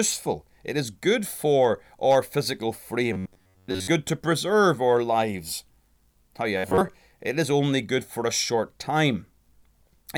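Robotic sound from repeated short buffers at 3.13–3.88 s, after "good for our physical", and 6.58–6.95 s, before "it is only good", in this speech: a rigid metallic buzz near 93.8 Hz, likely from a roughly 10.7 ms buffer replayed in place of missing audio.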